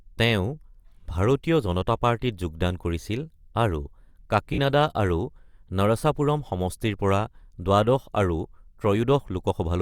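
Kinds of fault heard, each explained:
Lost LE Audio frames: about 50 ms of speech, 4.53 to 4.58 s, replaced by the LC3 decoder's repeated spectrum with randomised signs, heard as a brief noisy smear.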